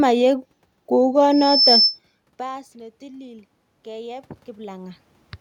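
From 2.38 s to 5.07 s the automatic gain rises. After the input drops by about 24 dB, just after the talker moves back around 2 s, the gain control lifts its gain by about 9 dB, so voice and room noise swell together.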